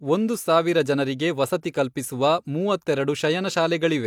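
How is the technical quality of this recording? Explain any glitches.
No glitches or technical faults are audible anywhere in the recording.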